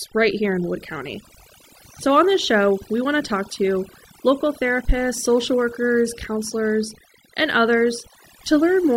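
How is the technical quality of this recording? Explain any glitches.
The recording is hurt by overdone noise removal, running the whole way through. The reduction was set too hard, so bands near the noise estimate get cut to nothing, taking softer parts of the speech along. The background goes near-silent with twinkly specks.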